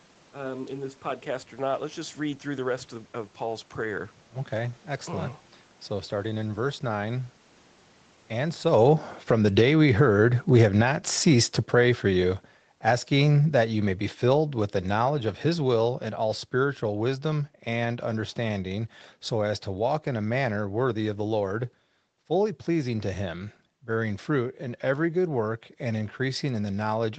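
A speech recording with two episodes of automatic gain falling. From 8.47 to 9.83 s the level drops by about 12 dB. From 10.41 to 16.01 s it sinks again by about 10 dB, ending just before "and all spiritual wisdom". The gain control judged the input too loud or its background noise too strong and pulled its gain down over a second or more. The room noise sinks along with the voice, which marks it as gain riding, though the talker also shifts around 8.5 s.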